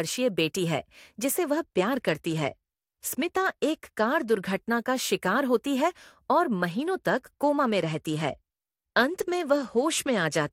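Two Bluetooth SBC bit pool drops, from 1.28 to 4.53 s and from 6.71 s to the end: treble dulls and gritty quantisation noise rises, consistent with the bit pool falling from about 31 to 13 on a congested link.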